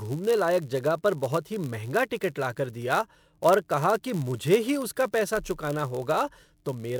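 Throughout the speech, block size mismatch (padded) leaves zero gaps in every block: a 91.5 Hz buzz and 0.996x speed, with pitch unchanged, unlike a sample-rate error.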